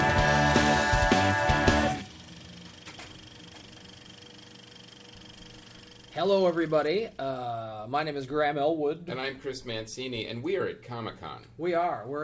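No faults found: the audio arrives over a call path with content ending at 8 kHz, consistent with a wideband G.722-type codec.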